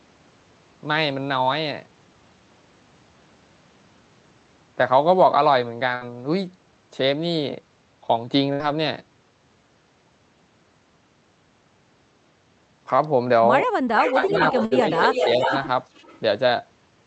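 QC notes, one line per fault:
5.95 s, 8.53 s and 14.65 s: burst of packet loss. Each time about 60 ms of audio is missing. The receiver fills roughly 55 to 65 ms by extending and fading the last sound, so a short held buzz or hiss replaces it before the audio resumes later.
13.97 to 14.26 s, 14.49 to 15.67 s and 15.95 to 16.20 s: echo leak. A delayed copy of the voice trails by about 380 ms, likely because the far end's loudspeaker output reached its microphone and its echo canceller passed it back. The copy is strong, about 5 dB below the speech, in the first two stretches and faint, about 30 dB down, in the last.
14.11 to 14.37 s and 14.97 to 15.51 s: speech suppressed in double talk. While the leaked echo overlaps the talker, the voice dips by around 5 dB in patches. The likely cause is an echo canceller that cannot separate its own talker from the loudspeaker echo, so it attenuates both.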